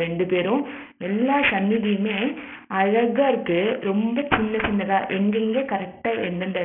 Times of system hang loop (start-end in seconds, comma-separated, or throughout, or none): none